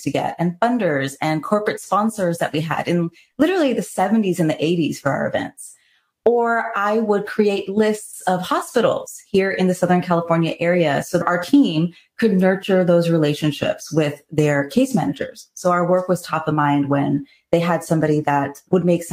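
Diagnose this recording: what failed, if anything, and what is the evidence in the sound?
Nothing failed, and no stage of the chain leaves an audible fault in this recording. With no event to point to, there is no time, evidence or mechanism to report.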